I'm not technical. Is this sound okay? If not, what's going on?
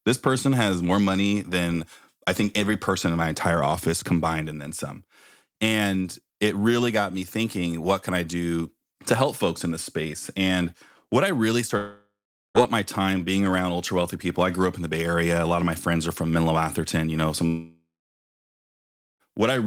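No. The speech cuts out from 11.77 to 12.58 s and again from 17.47 to 19.23 s, fading into buzz then silence, with the words lost. This is likely a long network dropout.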